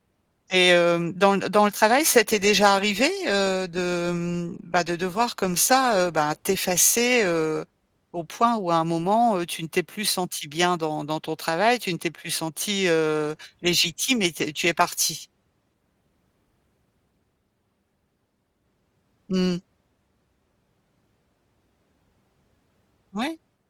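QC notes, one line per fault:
No faults found; the Opus voice compression on this speech keeps the full audio band and leaves only light coding texture, consistent with a moderate bitrate of around 24 kbps.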